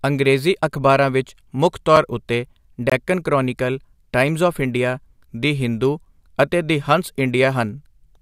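At 1.96 s the speech drops to a block of digital silence about 5 ms long, short enough to register as a single tick. At 2.90 to 2.92 s a second, 21 ms block is long enough to hear as a brief hole. The lengths suggest 256- and 1024-sample buffers left unfilled. The cut is abrupt, with no fade or smeared filler, which sets it apart from a concealed dropout.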